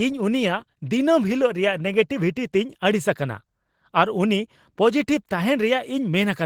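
Opus voice compression colours the speech from start to finish, and the damage is plainly audible. The sound points to the hybrid arrangement at a low bitrate, roughly 16 kbps: a linear-prediction layer carries the speech band while a transform layer fills the region above 8 kHz. The band stays open to about 20.3 kHz, but the coarse excitation coding leaves the speech hoarse and slightly robotic, with muffled-sounding detail.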